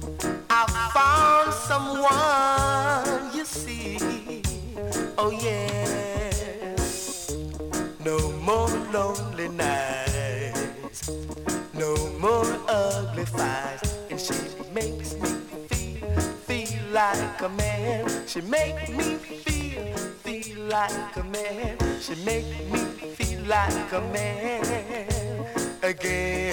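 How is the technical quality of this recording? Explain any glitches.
There is one glitch, from 19.95 to 21.45 s, where the sound turns suddenly hollow and phasey, as if heard through a tube, then returns to normal. This is channel delay (comb filtering): one channel runs late by roughly 5 ms, and summing the two to mono cancels shared content at evenly spaced frequencies. The first notch sits around 100 Hz, with further notches stacked at regular intervals above it.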